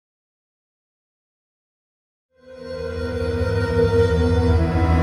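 Nothing stood out on listening; the level simply rises in a smooth, editor-style fade-in from around 2.5 s to 3.45 s, with no click or hard edge.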